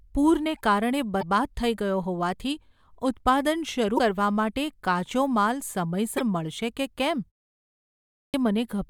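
Damaged data in a compressed stream shows up at 1.19–1.23 s, just before "થઈ ગયો હોવાથી ઉત્પાદન", again at 3.95–4.00 s right after that same phrase, and at 6.16–6.21 s following "કાચો માલ". Each time the decoder hits corrupted frames, loses sync and hunts for the next valid header. Each event lasts 40–50 ms.

A clipped start after a pause follows at 7.90–8.34 s. After 0.67 s of silence, the output device is slow to wake and swallows the first 438 ms. The speech bursts in abruptly, missing its opening sounds.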